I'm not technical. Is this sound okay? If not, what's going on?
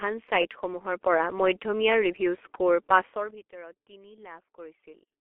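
No. All the way through, the speech sounds muffled and hoarse, like an old, cheap internet phone call, and consonants blur together. This is the G.723.1 codec, an early internet-telephony format that squeezes speech into very little data. It throws away everything above the range of a traditional phone line, which removes the crispness, and it updates its picture of the voice only in coarse chunks, so detail gets lost. Here the damage is heavy.

At 1.02 s, the voice and the background noise both suddenly get a bit louder at the same instant, with no gradual rise. This is the microphone volume stepped up. The calling software seems to have judged the microphone too quiet and turned up its input volume in a single jump. Because the whole signal is boosted together, everything after that moment simply stays louder.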